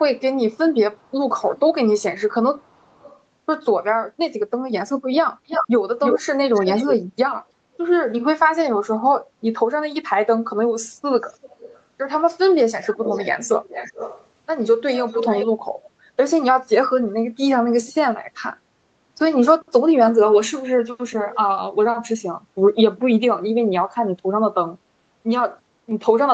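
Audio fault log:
5.47–6.95 s and 12.82–14.27 s, echo leak: a delayed copy of the speech trails it, 329 ms behind at about equal level, then 404 ms behind and about 10 dB quieter. This is likely a loudspeaker echo the far-end canceller missed. Spectrograms show repeated, right-shifted harmonic patterns, and waveforms a second offset envelope.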